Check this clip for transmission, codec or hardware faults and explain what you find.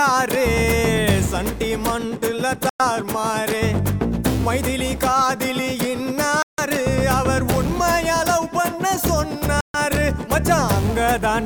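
Three brief dropouts stand out, at 2.69 to 2.81 s, 6.42 to 6.59 s and 9.61 to 9.76 s. The sound cuts to silence for about 0.10, 0.16 and 0.14 s, then resumes. These are likely Bluetooth stalls: delayed packets let the receiver's buffer empty.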